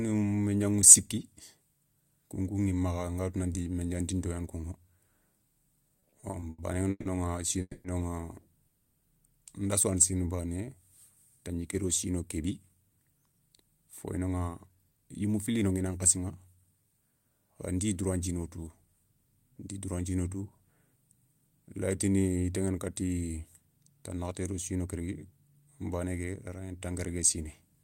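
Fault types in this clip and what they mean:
repeated stalls (stutter): The jitter buffer kept running dry because packets came in late or too slowly. Between 5.99 and 7.08 s the speech stops and restarts seven times. Each time the receiver stretched the last sound to bridge the wait. The longest hold lasts 150 ms, and 340 ms are filled in all, about a third of that stretch. Nothing is lost, but the speech drags and stutters.
call audio freeze: Two breaks interrupt the speech. At 7.61 s the last sound is carried on and fades into a brief silence, 230 ms filled in all, 40 ms of it silent. At 8.68 s there is a silent gap of 330 ms. Each time the speech picks up where it stopped, now running later by the length of the gap. The likely cause is packets held up in transit, leaving the jitter buffer empty.
jitter buffer slow-down: Just after "sou yani", from 10.11 to 10.66 s, the speech runs at 82% of its normal rate. 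The receiver was building up a reserve in its jitter buffer. It did this by repeating single pitch periods or bits of pauses many times, adding 110 ms in total. The pitch stays the same, but the sounds are drawn out and a little sluggish.
jitter buffer speed-up: The jitter buffer held more audio than it needed, so the receiver cut out short slices of one or a few pitch periods to reduce the delay. After "tandjiké do sino", from 12.37 to 16.61 s, the speech runs at 111%, losing about half a second. After "tanakhaté do", at 24.80 to 25.08 s, it briefly runs at 116%, losing around 50 ms. The pitch stays the same, but the delivery sounds hurried.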